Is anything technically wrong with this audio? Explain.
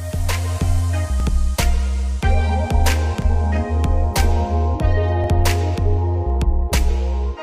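Yes, there's an overlapping chunks problem. At 1.20–1.22 s, 3.22–3.24 s and 5.24–5.26 s you get a little stutter or click, because the audio was handled in 2.0 s chunks and each new chunk starts 20 ms before the previous one finished. That 20 ms sliver gets played twice at every join, so the sound briefly repeats itself, roughly every two seconds, like a tiny hiccup on a regular beat.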